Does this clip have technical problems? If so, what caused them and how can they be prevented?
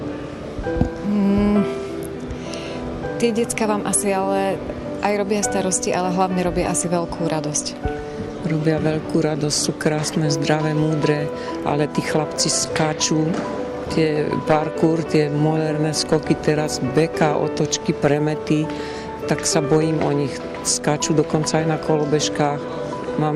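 No, this clip has no technical problems, so nothing needs preventing.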